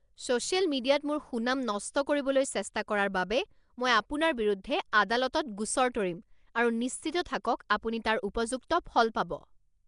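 This is speech, and the whole clip carries plainly audible codec damage with nothing above 10.6 kHz. The rough, hissy, smeared character points to Nellymoser compression, likely the old Flash microphone codec. It codes short blocks at a fixed two bits per sample, so weak bands get no bits and are filled with noise instead, and the sound fits a rate of around 44 kbps. There's also a pre-echo at about 7.59 s, just before "আপুনি তাৰ". A sharp attack landed late in a transform block, so quantisation noise sized for the loud part spread into the quiet moment ahead of it. You hear it as a brief hiss of about 12 ms leading into that attack, which softens the onset.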